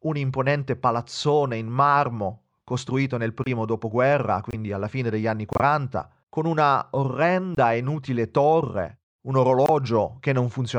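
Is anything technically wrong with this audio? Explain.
Yes. The speech drops to dead silence five times: at 3.44 s right after "costruito nel", at 4.51 s, at 5.53 s, at 7.55 s just before "e inutile torre un", and at 9.66 s right after "e inutile torre un". Each gap cuts in abruptly. Most last about 35 to 38 ms, but the one at 5.53 s runs 88 ms, which suggests several consecutive frames were lost there. This is corrupt frame muted. Flipped bits made the decoder reject damaged compressed frames, and the player filled each lost span with silence. The timing of the speech stays intact around every hole.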